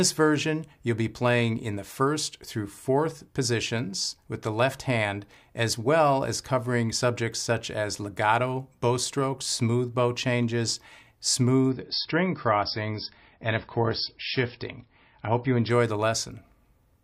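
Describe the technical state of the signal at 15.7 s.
At 15.7 s the stream is just leaving an adaptive-stream drop to a lower bitrate (11.7–15.7 s): the connection slowed, treble vanished above 5.6 kHz, and coding artefacts rose, consistent with roughly 24 kbit/s MP3.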